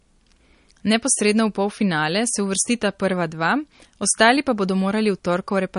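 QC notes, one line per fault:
Throughout, MP3 compression, likely at a low bitrate, which fits something near 40 kbps: nothing sounds above 10.6 kHz, so the speech loses its air. With bits this scarce, weak frequency lines drop in and out between frames, giving a plainly audible watery, swirling texture and metallic chirps on sibilants. A spectrogram shows a hard ceiling at 10.6 kHz and speckled, patchy upper bands.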